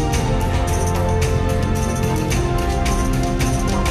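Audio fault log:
3.67–3.69 s, damaged data in the compressed stream: a brief glitch, as the decoder loses sync and hunts for the next good frame.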